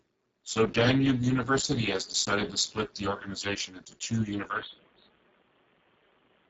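Speex codec, throughout the clip: this CELP speech coder has too few bits to describe the excitation, so the speech sounds hoarse and grainy, with a buzzy, near-robotic edge. Nothing survives above 7.7 kHz, and above about 4 kHz there is only a shaped, hissy fill rather than real detail. Damage this heavy points to a very low bitrate setting, around 6 kbps.

Input switched to a poorer device, from 4.50 s to the end: right after "the organisation into two", the sound abruptly turns dull and boxy. Everything above 3.8 kHz disappears, and a faint new background noise sits far below the speech. There is no gap and no jump in loudness at the change. This is most likely the system moving its input to a narrower-band microphone or a headset's call profile in mid-recording.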